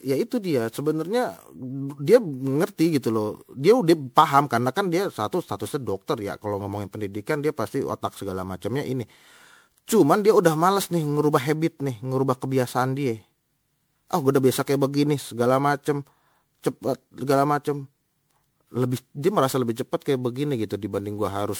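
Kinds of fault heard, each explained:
generation loss: the speech sounds swirly, smeared and hollow throughout, with blurred consonant attacks and nothing above 20.8 kHz. This is likely from around ten rounds of MP3 re-encoding near 128 kbit/s, since a single encode at that rate would sound far cleaner.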